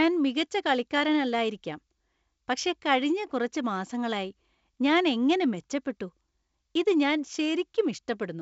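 No technical faults can be heard in this speech, which carries the normal sound of G.722 wideband telephone coding.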